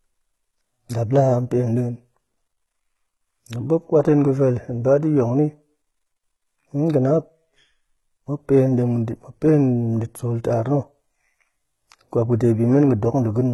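Right from the start and all the way through, the speech has that synthetic, papery top end you get from HE-AAC compression, likely at a very low rate, which fits something around 16 kbps. The codec keeps only the lower band properly and fakes the treble by copying lower bands upward under a rough envelope, so the highs sound bright but wrong. The damage is heavy: s sounds come out gritty and lispy, with a metallic sheen.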